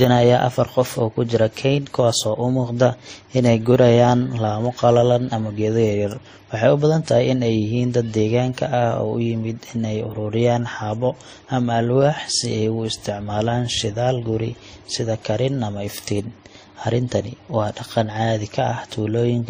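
Throughout the speech, the sound carries two overlapping kinds of coding damage: the artefacts of different codecs heard together, and a hard ceiling with nothing above 15.3 kHz. This points to transcoding between lossy codecs, likely a WMA encode at around 48 kbit/s re-encoded to MP3 at around 37 kbit/s. The second encoder spends its limited bits reproducing the first one's artefacts and then adds its own, so both signatures are heard together.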